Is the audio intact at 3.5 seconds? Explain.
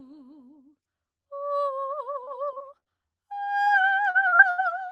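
No, there's a short concealed packet loss from 3.44 to 3.48 s. About 20 ms of music went missing and the decoder papered over it by extending the previous sound, leaving a brief smear.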